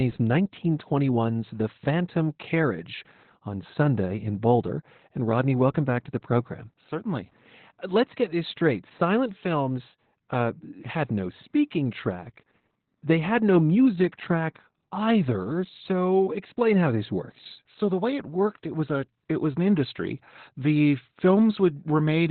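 Opus voice compression affects the whole speech clip, with heavy damage throughout. The band stops at 4.3 kHz, and the linear-prediction coder rebuilds the voice from coarsely coded excitation, leaving it muffled, hoarse and robotic, which fits narrowband SILK near 8 kbps.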